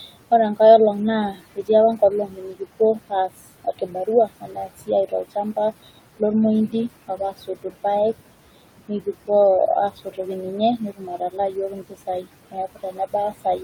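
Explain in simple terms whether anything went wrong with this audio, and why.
Noise suppressor artifacts run through the whole speech clip. The suppressor tries to remove the steady background noise of the room, which sits a fair way below the voice. It turns down any frequency band it judges to be noise, frame by frame. Here it pushes that background down hard, so the noise drops away in the gaps and comes back under the talking.

Speech cut by the noise suppressor happens in five places: 1.33 to 3.3 s, 3.64 to 5.57 s, 7.08 to 7.74 s, 9.96 to 10.19 s, and from 10.78 s to the end. In these spans the suppressor mistakes quiet parts of the speech, such as soft consonants and word endings, for background and turns them down with it. Each of the first four spans loses well under a second of sound in total. Those sounds come across as swallowed or faint.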